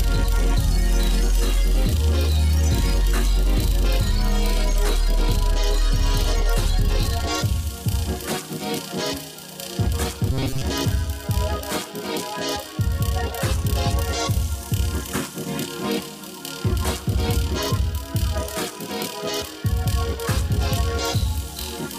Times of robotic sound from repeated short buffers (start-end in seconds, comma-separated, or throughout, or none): 10.32-10.62